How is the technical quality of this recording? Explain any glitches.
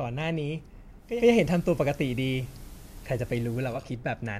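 The speech is marred by one glitch. From 0.98 to 3.89 s, hiss rises, level shifting about 3 dB: digital radio blending to analogue FM over 294 ms.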